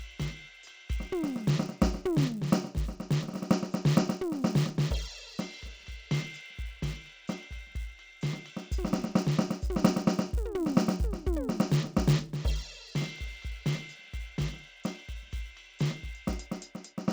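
From start to finish the music carries a steady buzz at 100 Hz, the signature of a resampler restarted on every block. Each 10 ms block was converted on its own, so its edges were computed against silence or wrapped samples, leaving a small error every 10 ms. The clip was converted from 16 kHz to 48 kHz. Unlike mains hum, the buzz follows the signal and disappears when the music does.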